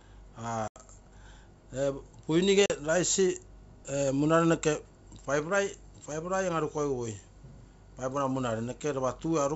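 Packet loss on an ADPCM call cuts hard-edged holes at 0.68 to 0.77 s (about 80 ms lost) and 2.66 to 2.71 s (40 ms). Missing packets became silence. The decoder's predictor and step size drifted, so the wideband G.722 speech resumes briefly slightly distorted.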